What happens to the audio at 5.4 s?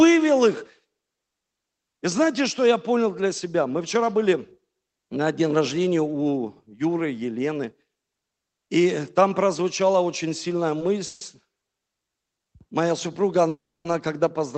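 Nothing goes wrong at 5.4 s: the speech carries on intact through the call path, with no dropout, glitch or distortion at that point.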